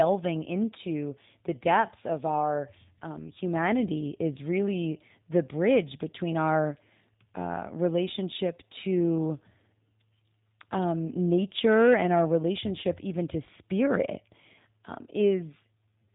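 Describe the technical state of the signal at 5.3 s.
At 5.3 s, as throughout, the speech carries G.729 codec damage. Rebuilt from a filter model and a few pulses, it loses everything above 4 kHz and sounds plainly rough.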